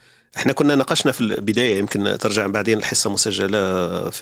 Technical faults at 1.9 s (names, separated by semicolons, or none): lost packet rebuilt from error correction